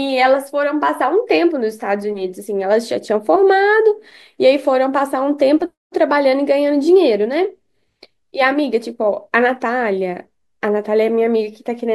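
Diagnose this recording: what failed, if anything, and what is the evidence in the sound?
Nothing failed here: the speech comes through steadily with no dropouts, clicks, distortion or other sign of trouble at any stage from the wiring to playback.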